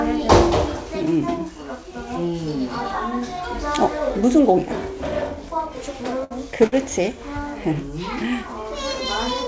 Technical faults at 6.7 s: short stall from a late packet

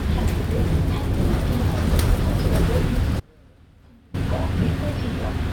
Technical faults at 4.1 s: audio dropout to a faint residue

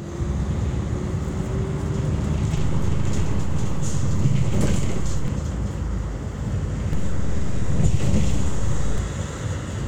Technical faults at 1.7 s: none

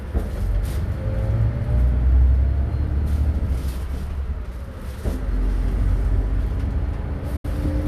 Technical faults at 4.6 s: none

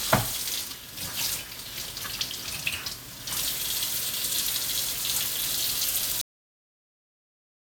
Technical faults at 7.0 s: generation loss; cut-off end

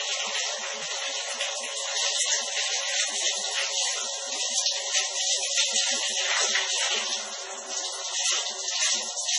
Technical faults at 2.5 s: MP3 compression

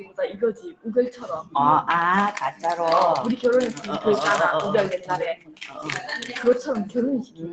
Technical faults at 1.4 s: noise suppressor applied to music or sounds; sound cut by the noise suppressor

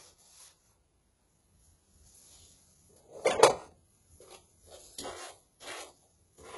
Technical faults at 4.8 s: HE-AAC compression

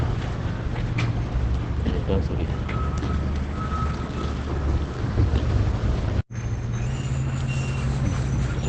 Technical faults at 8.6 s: Opus compression; section at the wrong speed

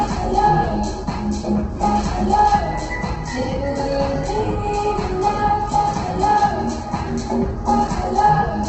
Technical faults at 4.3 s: Opus compression

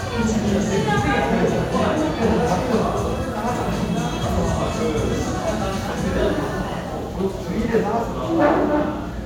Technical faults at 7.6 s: none

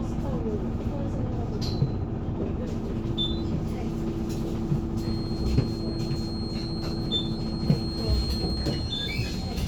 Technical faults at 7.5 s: feedback whistle

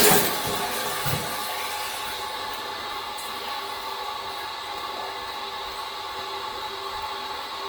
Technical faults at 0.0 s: Opus compression

